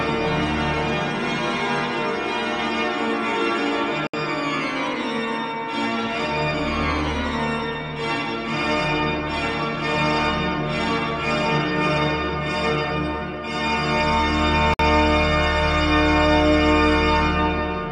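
At 4.07 s the sound drops out for about 66 ms, and at 14.74 s it drops out again for about 56 ms. Each is a gap at a join of encoded pieces: separately encoded segments were butted together untrimmed, so one encoder's start-up delay and another's padded final frame both remain. The codec blurs each gap's edges, shortening the true silence, and the sound then resumes where it stopped.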